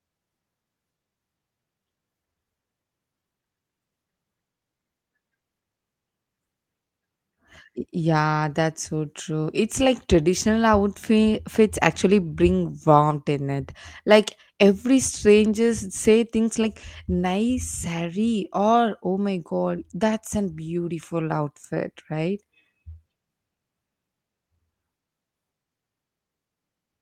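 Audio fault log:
Nothing to log here, as the speech comes through without a single fault to report.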